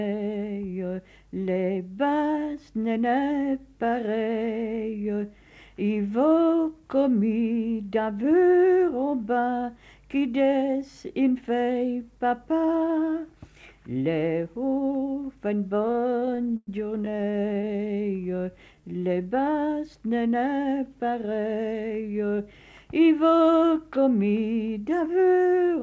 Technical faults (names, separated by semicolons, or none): repeated stalls (stutter); jitter buffer slow-down; jitter buffer speed-up